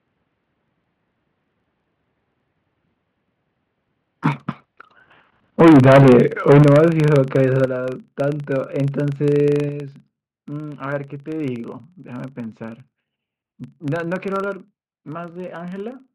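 A processing filter in the chain is restarted on every block, dropping its state and starting each block from silence, so this speech recording carries a steady 25 Hz buzz of small ticks throughout, which fits 40 ms blocks, rising and falling with the level of the talking. The input gain was likely set too high, causing microphone overload from 5.6 to 6.2 s and 6.48 to 6.85 s, with peaks pushed about 13 dB past the converter's limit and roughly 40 and 20 percent of samples flattened, and briefly from 7.16 to 7.36 s, only about 1 dB over and under 1 percent clipped, giving the loudest syllables a harsh, crackling edge. In response, the call software likely lowered the input volume in single steps, so the microphone volume stepped down at 5.62 s by about 3 dB, 6.63 s by about 10 dB, 7.65 s by about 6 dB and 9.69 s by about 5 dB, each a sudden drop in voice and background together.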